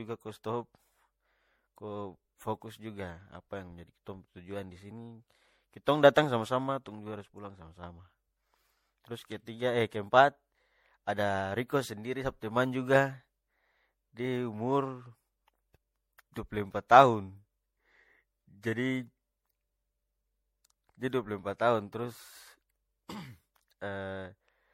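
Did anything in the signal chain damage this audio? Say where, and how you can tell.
Yes. Throughout the speech there is a swirly, hollow smear with blurred consonant attacks and nothing above 16.5 kHz, more damage than one encode would cause. This is likely generation loss at the codec stage: around seven MP3 passes near 64 kbit/s, each requantising on a shifted frame grid.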